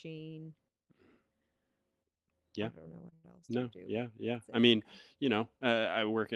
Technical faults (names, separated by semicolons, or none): short stall from a late packet